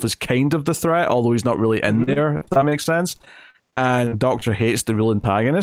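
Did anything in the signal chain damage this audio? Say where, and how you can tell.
Yes. Repeated packet loss in the network, from 2.03 to 4.43 s: seventeen gaps up to 41 ms, patched by extending prior sound, giving choppy, robotic speech rather than silent dropouts.

Short concealed packet loss, also network, at 5.21 to 5.25 s: about 20 ms lost and filled, a brief smear instead of a click, so not a buffer underrun.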